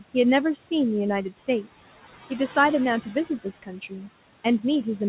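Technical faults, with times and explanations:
Throughout, noise suppressor artifacts: the room noise sitting about 16 dB under the speech is pushed down by about 15 dB in the gaps, then swells back under each phrase, so the background pumps. A spectrogram shows the noise floor dropping dark between phrases and speckled, flickering bins where the leftover noise survives, all below a sharp ceiling at 4 kHz that points to a narrowband call codec.
1.3 to 1.8 s and 3.02 to 4.09 s, speech cut by the noise suppressor: soft parts of the speech were mistaken for noise and turned down with the background, by up to about 13 dB in the first stretch and about 14 dB in the second. That affects roughly 0.15 s and 0.4 s of sound, and those syllables come across swallowed or faint. On the waveform the envelope dips, and the spectrogram shows weakened, patchy energy where those sounds should be.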